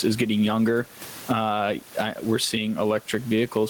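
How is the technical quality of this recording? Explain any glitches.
The recording has one problem, present throughout. Gain pumping: the background swells between phrases and ducks by around 15 dB under each loud syllable, likely from excessive mic gain driving a fast limiter. The room noise that rises in those gaps sits about 30 dB below the speech.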